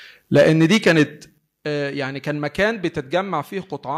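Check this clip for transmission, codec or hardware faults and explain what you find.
There are two problems here, both on the capture side: the mic clips, and its level gets knocked down in steps.

Microphone overload shows up from 0.35 to 1.03 s and again briefly at 2.61 to 2.64 s. The peaks get flattened and the loudest syllables turn harsh and crackly. The input gain was likely set too high, so the signal ran about 7 dB past the converter's ceiling in the first stretch, with roughly 7 percent of samples clipped, and about 1 dB over in the second, with only a small fraction clipped.

The microphone volume is stepped down three times: about 2 dB at 0.37 s, about 8 dB at 1.38 s, and about 3 dB at 3.42 s. Each time the speech and the background drop together in one abrupt step. This is likely the call software reacting to the clipping by cutting the device's input gain.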